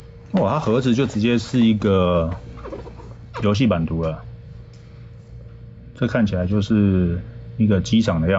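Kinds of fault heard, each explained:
Gain pumping: a gain swing of roughly 5 dB throughout, most likely from input gain set too hot with a fast limiter clamping each peak, so the sound comes out squashed.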